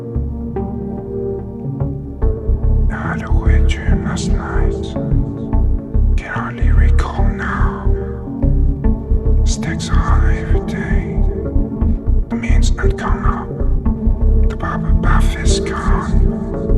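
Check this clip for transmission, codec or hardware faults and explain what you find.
One fault stands out: a time-stretched section from 11.25 to 13.97 s, sped up about 1.62 times with pitch unchanged. It sounds choppy and rushed, likely from software dropping short slices. The spectrogram shows compressed, jumpy texture with steady harmonic spacing.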